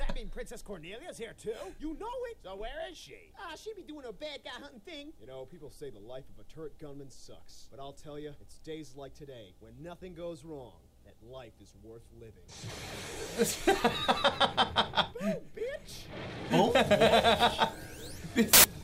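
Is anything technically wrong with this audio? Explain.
Yes. From 18.53 to 18.64 s a burst of very loud white noise with hard edges cuts in. This is file tags played as audio: the embedded cover picture's compressed bytes are read as samples, and their near-random values come out as loud static.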